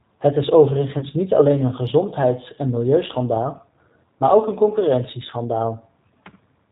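A speech clip carried over a G.729 codec, at a quality that fits an 8 kbit/s G.729A stream. The codec rebuilds the voice from a vocal-tract filter, a pitch predictor and a few pulses per frame rather than sending the waveform, and it discards everything above 4 kHz. The codec damage is plainly audible: the speech sounds band-limited, slightly rough and synthetic, with a dull top end. At 0.99 s there is VoIP packet loss concealed by the speech codec, just before "niet alleen een". The gap points to about 30 ms of missing audio, roughly three frames. The decoder fills it by extending its last pitch and filter at falling gain, so the sound smears into a brief buzzy tone or coloured noise that fades. Because each frame builds on the previous one, the voice stays weak or distorted for tens of milliseconds after the packets return at about 1.07 s.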